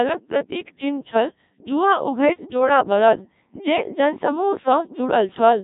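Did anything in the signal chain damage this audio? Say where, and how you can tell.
Yes: the codec stage did it. Codec 2 vocoder runs throughout, with robotic, buzzy speech and nothing above 3.8 kHz. Resynthesis from pitch and envelope fits Codec 2, here in its 1.3 kbit/s mode.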